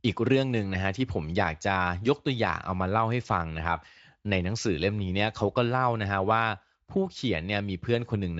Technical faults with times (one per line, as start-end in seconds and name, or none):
none